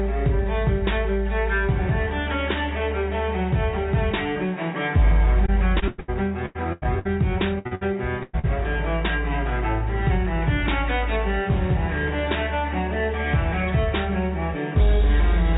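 Repeated packet loss (robotic sound) runs from 5.46 to 6.10 s and from 6.46 to 7.07 s. Each stretch has four gaps, the longest about 0.1 s, patched by continuing the last sound, giving a choppy texture with pieces missing. Burst of packet loss follows at 7.59–7.67 s, 7.75–7.83 s and 8.23–8.35 s, where 60 to 100 ms went missing and the continued sound fades into a held buzz or hiss before the audio resumes further on. Short concealed packet loss at 7.67–7.73 s and 8.39–8.45 s fills 40 ms holes, heard as brief smears or wobbles. All of this sits in audio with nothing above 4 kHz, which fits a narrowband call codec such as G.711.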